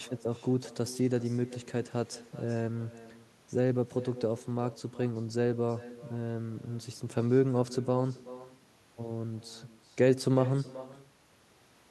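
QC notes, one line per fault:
Throughout, echo with no canceller: every phrase comes back as a fainter, thinner copy around 400 ms later, sitting about 18 dB under the direct speech. The far end is playing the call out of a loudspeaker, their mic catches it, and nothing on their side subtracts it before sending it back, so you get your own talker returned after the network round trip, coloured by their speaker.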